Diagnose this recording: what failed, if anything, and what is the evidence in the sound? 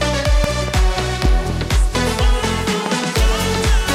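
Loud pops break in three times, and the failure sits in the analogue wiring stage. A double pop runs from 0.44 to 0.71 s and peaks about 15 dB above the sound. Another pair follows at 1.25 to 1.52 s, about 10 dB up. A single sharp pop lands at 2.86 to 2.88 s, again about 15 dB up. The sound continues underneath each one. The likely cause is a sudden voltage step from a loose plug, switch contact or static discharge, which the following circuits shape into a thump.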